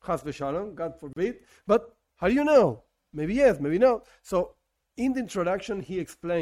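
At 1.13 s the sound drops out abruptly into a short gap of about 34 ms, ending at 1.16 s, with softened edges on both sides, before resuming exactly where it left off. This is a gap at a join of encoded pieces: separately encoded segments were spliced without trimming each encoder's leading delay and final-frame padding, so that dead air stays in the stream. The joins recur every 6.0 s, so only this one falls within the clip.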